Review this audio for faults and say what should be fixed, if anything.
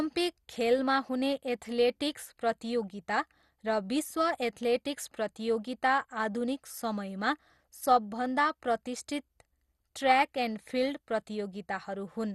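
Throughout the speech the sound is dull and gurgling, with a granular grit and nothing above 12.2 kHz. The likely cause is MP2 compression at a low bitrate, perhaps around 64 kbps, where upper sub-bands are dropped and the remaining bands are coarsely quantised. To prevent it, encode at a higher bitrate or keep a lossless master for distribution.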